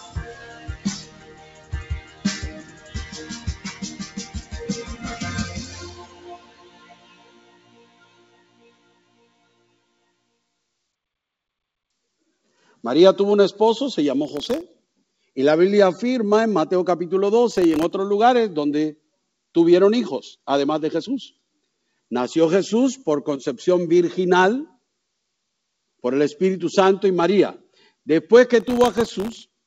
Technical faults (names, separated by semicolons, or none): noise suppressor applied to music or sounds; sound cut by the noise suppressor; processor overload crackle